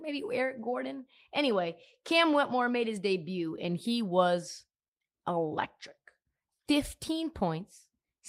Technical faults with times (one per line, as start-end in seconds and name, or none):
none